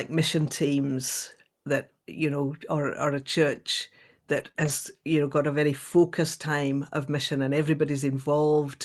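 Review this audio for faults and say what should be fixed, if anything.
Lost packets rebuilt from error correction occur at 0.41–0.43 s (just before "teams that you know"), 3.51–3.57 s (after "know or or a"), 4.35–4.49 s and 4.56–4.70 s (before "you know got a"). The rebuilt stretches last 20, 40, 80 and 80 ms, which fits one, two, four and four lost 20 ms packets. The decoder played the low-bitrate copy carried in each following packet, so there is no gap, but the sound turns briefly rough and grainy. On a spectrogram these stretches show smeared, noisier harmonics, while the waveform stays continuous. Reducing packet loss on the network path, for example with a steadier connection or traffic prioritisation, would keep these repairs from being needed.

Short concealed packet loss sits at 4.51–4.56 s, between two of the rebuilt stretches. About 20 ms never arrived in time, and the receiver extended the preceding sound for 29 ms before blending back, giving a brief smear or wobble. 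On a spectrogram the harmonics freeze and then blur, with a seam on the waveform. A larger jitter buffer, together with fixing the underlying loss, would let late packets arrive before the receiver has to conceal them.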